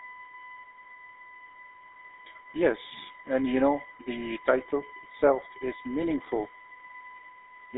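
Right from the start and running the whole way through, there's a USB whine: a steady, fixed-pitch tone built on 1 kHz, loudest at its 2 kHz harmonic, sitting roughly 25 dB under the speech. That's the bus's 1 ms frame rhythm leaking in through power or ground.

Also present throughout is GSM full-rate codec damage, and it's plainly audible. The speech is squeezed into a phone band of about 300 Hz to 3.6 kHz with nothing above 3.8 kHz, and has that buzzy, gravelly edge from a pulse-driven vocal-tract model, which fits the 13 kbps full-rate coder.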